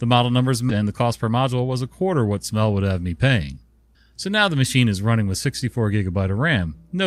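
This speech clip has two delivery faults. A skip ahead occurs at 0.69 to 0.71 s, right after "model numbers": roughly 0.4 s of audio was discarded in transit or by an overflowing jitter buffer, so the speech leaps forward and both sides are spliced with no gap at all. Then from 1.29 to 1.77 s, between "the cost per" and "a quarter what", an overfull jitter buffer triggers a speed-up, trimming pitch-period slices totalling about 50 ms so the speech runs at 110% speed, hurried but at unchanged pitch.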